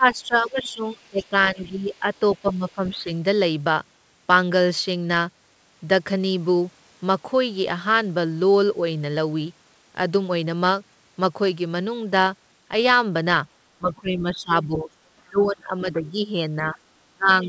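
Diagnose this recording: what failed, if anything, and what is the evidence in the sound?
Speech suppressed in double talk, at the call-processing stage: the talker dips from 0 to 3.09 s, by up to about 15 dB over roughly a second and a half, and from 13.79 s to the end, by up to about 20 dB. The echo canceller likely attenuated the talker along with the echo.

The other side's voice leaking through, also in call processing: a faint second voice, about 30 dB below the talker, sits under the speech from 0.14 to 2.89 s and from 14.33 to 15.42 s. Residual loudspeaker echo likely survived the echo canceller into the microphone signal.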